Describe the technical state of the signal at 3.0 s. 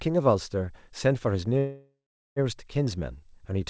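At 3.0 s the speech is intact, with no dropout, glitch or distortion, only the narrowed band of a wideband call path that leaves nothing above 8 kHz, which fits G.722 coding.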